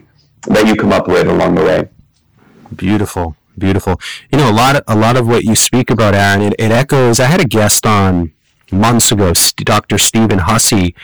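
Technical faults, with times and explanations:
Throughout, hard clipping: the speech is driven about 22 dB past what the stage can pass, so roughly a third of the waveform is sliced flat. Those squared-off peaks throw harmonics high up the spectrum. Every loud syllable turns into harsh, buzzing fuzz.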